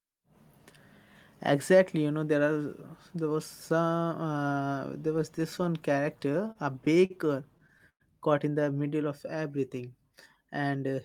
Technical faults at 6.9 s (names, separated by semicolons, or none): repeated stalls (stutter)